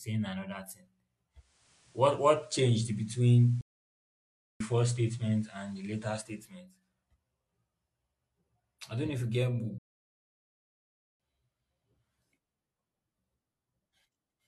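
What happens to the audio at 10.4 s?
At 10.4 s the speech is inside a playback stall running from 9.78 s to 11.20 s. The output drops to silence for about 1.4 s in mid-flow, then the audio resumes. The likely cause is the player starving for data or its playback thread being held up, so nothing reached the output until the buffer refilled or the thread was released and delivery picked up again.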